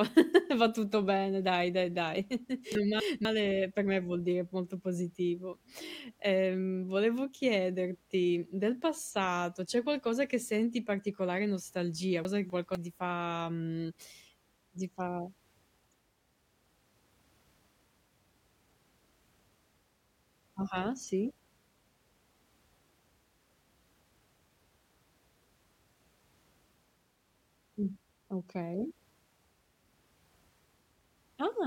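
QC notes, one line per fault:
2.75–3.25 s and 12.25–12.75 s, chunks out of order: after "bene dai dai dai" and again after "che senti particolare nostalgia", a 250 ms chunk plays one chunk late, after the one that should follow it. Nothing is missing, but the swapped order jumbles each half-second, leaving three hard joins.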